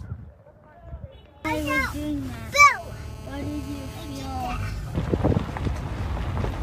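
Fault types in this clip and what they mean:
GSM phone buzz: A nearby 2G phone in a call transmits radio bursts about 217 times a second, and the audio circuit rectifies them. From 2.70 to 4.71 s a hard, raspy, harmonic-rich 217 Hz buzz sits about 20 dB below the sound. It is steady and continuous, unlike the broken pattern that follows it.
GSM signalling bursts: From 4.72 to 6.53 s a nearby phone is in a call, but its user is silent, so it sends only short groups of bursts. These come through as even ticks with a longer 217 Hz buzz twice a second, some 25 dB down, intermittent rather than a constant drone.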